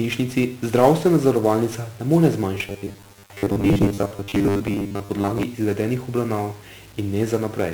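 Throughout the speech, heavy 1-bit DFPWM compression leaves a broadband fuzzy crackle and hiss over the treble, unlike the swirly, watery artefacts of transform codecs. From 2.55 to 5.43 s, a rigid metallic buzz at 100 Hz appears. It is likely robotic sound from repeated short buffers, with roughly 10 ms chunks replayed for about half the time. Its fixed pitch sets it apart from the steady codec noise.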